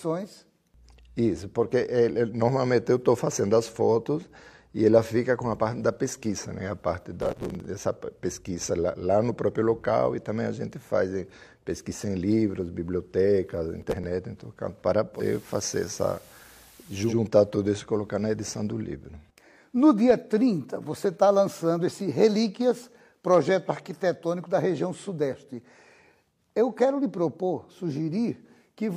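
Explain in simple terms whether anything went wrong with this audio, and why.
Yes, two different things go wrong here.

First, there's processor overload crackle at 7.22 to 7.65 s and again at 13.82 to 14.04 s. The machine handling the audio got too busy to finish each tiny chunk of sound on time, roughly every 5 ms. The late chunks were simply dropped, so lots of little hard-edged gaps pile up into a gritty tearing that stops once the load eases. The first burst is the longer one.

Then, from 15.13 to 17.16 s, you hear digital radio blending to analogue. The receiver lost its digital signal and faded over to the ordinary FM broadcast of the same station, then back again. The switch takes about a tenth of a second each way. The volume doesn't jump, but a faint hiss creeps in underneath, well below the sound.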